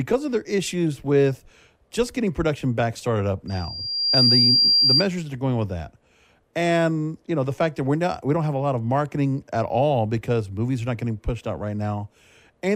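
Just after "production back started up", at 3.47 s, loudspeaker feedback squeal sets in and lasts until 5.06 s. The microphone is picking up the loudspeaker it feeds. At 4.7 kHz the loop gain passes one, so that frequency feeds on itself. A thin, piercing tone swells from nothing to full strength in well under a second. It then sits around 5 dB above the speech until it ends.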